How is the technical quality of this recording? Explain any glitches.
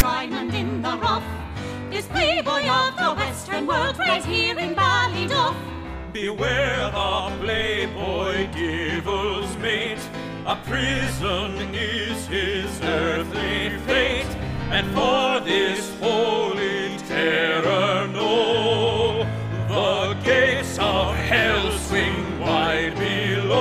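There is one glitch, right at the start. At 0.0 s, a brief hard-edged burst of static is file tags played as audio: text metadata decoded as samples, giving a loud, one-sided rasp.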